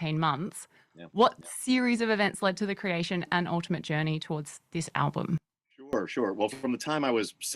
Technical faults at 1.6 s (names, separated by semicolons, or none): none